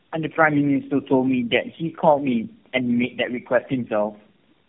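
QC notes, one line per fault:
throughout tandem speech coding: the speech sounds as though it passed through about four low-rate speech codecs in a row, likely a GSM full-rate, AMR-NB and G.729A chain bridged by G.711 links, each decoding and re-encoding the previous coder's already damaged output. The errors compound, so the speech is rougher, more muffled and more warbly than any single codec would leave it, with nothing above 3.4 kHz.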